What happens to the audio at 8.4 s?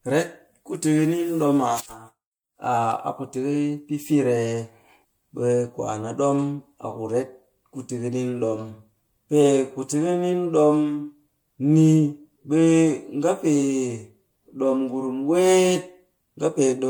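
At 8.4 s the speech sounds swirly, hollow and smeared with blurred attacks, as it does throughout: generation loss, likely from about seven passes through roughly 94 kbit/s MP3.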